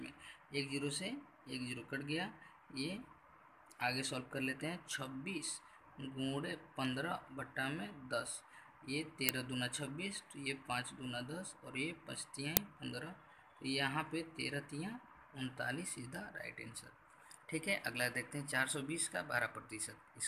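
At 9.29 s a very short, loud crack cuts through the sound, and at 12.57 s a second one follows, about twice as long. Both are uninitialised-buffer faults: a playback block went out before any audio had been written into it, so stale memory was played as samples. The lengths, roughly 1.3 ms and 2.7 ms, fit 64- and 128-sample blocks. This sets them apart from ordinary clicks or dropouts, which carry no harsh noise inside them.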